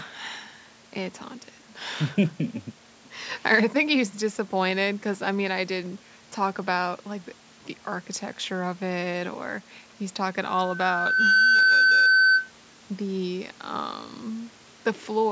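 From 10.40 to 12.51 s a steady 1.5 kHz tone swells over about a second to roughly 10 dB above the speech: loudspeaker feedback squeal, where the microphone re-amplifies its own loudspeaker.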